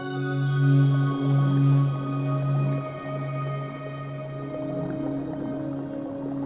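No technical faults can be heard; the sound comes through an ordinary G.711 call path with nothing above 4 kHz.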